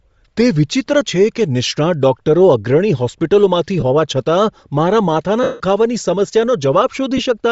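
Speech with a grainy, breathy edge throughout, likely from Bluetooth LC3 compression at a low bitrate near 32 kbps, which blurs the upper band. Lost LE Audio frames cause brief noisy smears at 1.68, 3.80 and 7.17 s. At 5.43 to 5.60 s a longer gap fades away toward silence.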